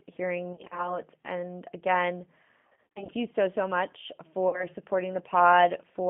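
G.729 speech codec, throughout: the speech is squeezed into a narrow telephone band of roughly 150 Hz to 3.5 kHz and rebuilt from a filter, a pitch predictor and a few pulses. The result is a rough, slightly synthetic voice, which fits 8 kbit/s G.729A.

VoIP packet loss concealed by the speech codec, at 0.53 to 0.97 s, 2.67 to 3.13 s and 4.49 to 4.66 s: the decoder fills the gaps by extending its last pitch and filter at falling gain. About 100 ms is missing across the first span, in runs of up to 30 ms. The second span is the worst, with about 250 ms missing in runs of up to 40 ms. About 40 ms is missing around the third. At each gap the speech smears into a fading buzz or coloured noise, and it stays weak or distorted for a short while after the audio resumes.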